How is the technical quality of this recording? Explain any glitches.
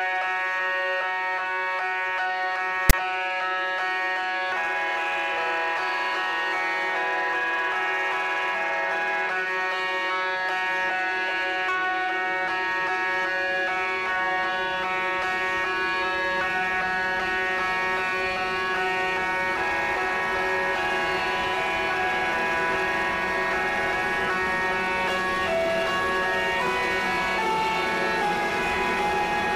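One glitch stands out, at 2.90 to 2.93 s. It is a case of file tags played as audio. For about 34 ms, a block of text tags is decoded as if it were samples. The text bytes give a harsh, loud rasp pushed off-centre to one side. The zero padding after it drops to dead silence. The burst starts and stops with hard edges, like a snap of static.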